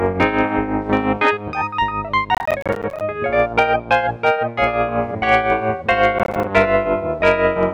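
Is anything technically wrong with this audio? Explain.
Yes. Processor overload crackle occurs from 2.35 to 3.01 s and from 6.19 to 6.44 s. Buffers finish late in quick succession, and each miss drops a short silent gap with hard edges. The gaps, spaced like roughly 10 ms buffers, blur into gritty crackling.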